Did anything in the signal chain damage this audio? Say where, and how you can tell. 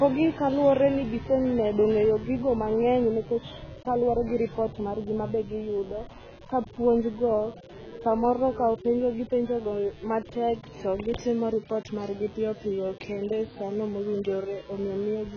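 Yes. In the analogue wiring, switching spikes from a dimmer, rectifier or unshielded cable got into the signal path. They arrive twice per 60 Hz mains cycle, and their harmonics climb well into the kilohertz range. The result is a mains buzz running under the speech for the whole clip, a steady raspy tone at roughly 30 dB below the speech, audible in every pause and never changing in pitch or level.

The speech also sounds dull and smeared from start to finish, with nothing at all above 6.8 kHz. Sibilants have a fizzy, swirling texture, and sustained vowels warble. This points to AAC compression as the likely cause, most plausibly AAC-LC at a very low bitrate, around 16 kbps. At that rate the encoder lowers its cut-off and quantises the remaining frequency lines so coarsely that parts of the spectrum drop out or are filled with substitute noise.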